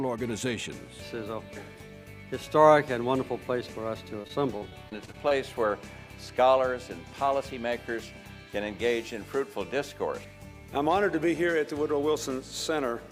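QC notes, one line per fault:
4.21–5.32 s, repeated packet loss (robotic sound): eight short dropouts in about a second, the longest around 42 ms, together taking away roughly 180 ms of audio, about a sixth of the stretch. Each hole is bridged by stretching the preceding sound, so the passage turns choppy. On a spectrogram the gaps show as smeared, repeated vertical slices with frozen harmonics. On a waveform they show as short, looped-looking cycles breaking the normal envelope.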